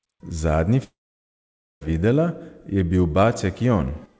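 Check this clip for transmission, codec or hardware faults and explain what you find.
One transmission fault stands out in this speech clip, heard through a band that stops at 8 kHz, as a G.722 call path would give.

From 0.84 s to 1.83 s there is a long network dropout, most likely caused by a run of packets that never arrived. The receiver extends the last sound briefly as a fading buzz, then leaves near silence for about 0.88 s. Speech resumes at "videla je bil" with roughly a second simply gone. A brief concealment glitch would fill a few tens of milliseconds smoothly, but here the filler dies out into silence and the lost stretch is never recovered.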